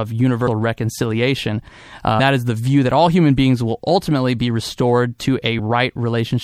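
All the way through, the speech has a watery, swirly edge with dulled highs, most likely MP3 compression squeezed hard, which fits a low rate around 64 kbps.

At 0.46 s, 2.18 s and 5.58 s, compressed frames get skipped: the audio leaps ahead by roughly 150, 300 and 70 ms, whole 26.1 ms frames, each join a brief smeared blip.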